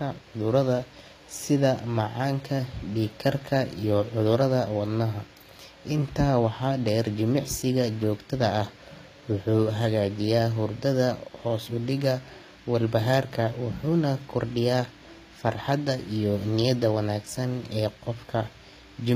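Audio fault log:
Throughout: HE-AAC compression, likely. The speech treble is rebuilt, not kept. Upper bands are copied from lower ones, so harmonics misalign above the crossover. S sounds turn gritty and metallic. Damage is plainly audible. Nothing remains above 15.5 kHz. This fits roughly 24 kbps.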